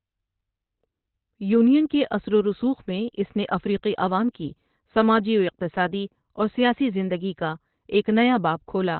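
Throughout the clip the speech sounds muffled, hoarse and boxy, with nothing above about 4.3 kHz and heavy codec damage. This is likely Opus compression at a very low rate, fitting roughly 12 kbps, where the encoder drops to its narrowband speech mode.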